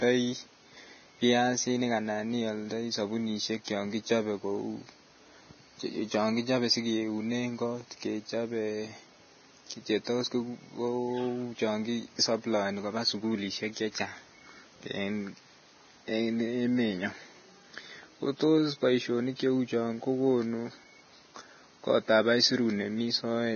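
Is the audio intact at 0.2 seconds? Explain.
No. At 0.2 seconds, as through the whole clip, the speech shows the marks of heavy Vorbis compression, likely at a bitrate near 18 kbps. The encoder has cut everything above 6.5 kHz and quantised the remaining upper band so coarsely that its fine structure is replaced by noise of similar energy. The result is dull, hissy and grainy speech, with roughened tones and smeared consonant onsets.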